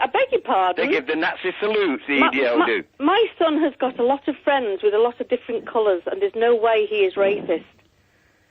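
Nothing in this one trips the ear as a technical fault, so there's nothing to flag here at all.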